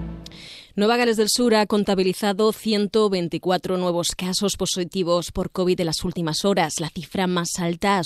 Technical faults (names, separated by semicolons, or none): none